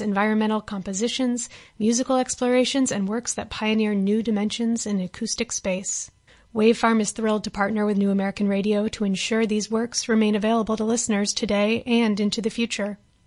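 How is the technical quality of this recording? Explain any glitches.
Nothing stood out as a problem on listening to this recording.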